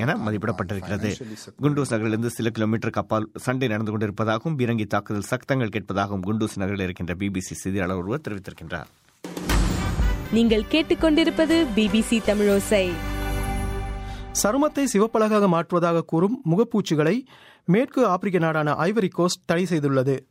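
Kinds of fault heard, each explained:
Nothing went wrong here that you'd notice by ear, so there's no fault to list for this one.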